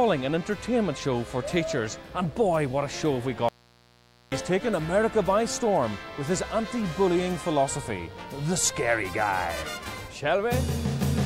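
A steady, raspy mains buzz runs through the whole recording, sitting roughly 30 dB below the sound. Switching spikes from a dimmer, rectifier or unshielded cable arrive twice per 60 Hz cycle. A spectrogram shows evenly spaced horizontal lines at 60 Hz multiples reaching several kHz, and the waveform shows small, regular spikes 120 times a second.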